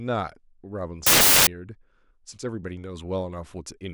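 From 1.07 to 1.47 s, samples built from the wrong bytes turn the speech into loud, harsh broadband noise as misordered bytes promote low bits.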